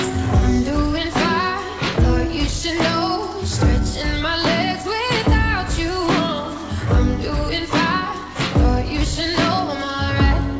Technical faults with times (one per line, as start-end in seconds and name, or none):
none